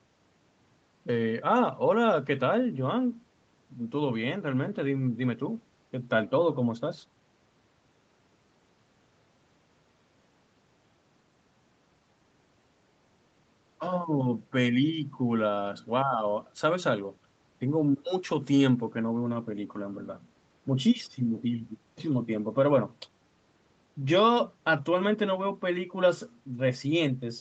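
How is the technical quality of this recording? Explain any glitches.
No audible glitches or faults.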